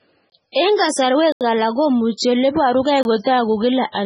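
Throughout the speech, nothing reaches above 10.4 kHz. The sound is watery and swirly, with heavy damage and metallic chirps on s sounds. The likely cause is MP3 compression at a very low bitrate. Short of bits, the encoder cuts the treble and drops weak frequency lines frame by frame.

Blocks of digital silence fall at 0.30 to 0.32 s, 1.32 to 1.41 s and 3.03 to 3.05 s. The outer two last 21 ms, which fits an unfilled 1024-sample buffer. The middle one lasts 85 ms, which fits 4096 samples.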